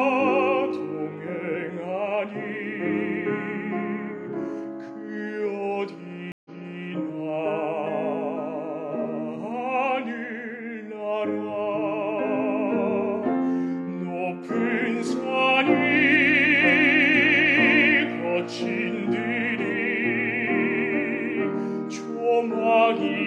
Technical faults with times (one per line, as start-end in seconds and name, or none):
6.32-6.87 stream reconnect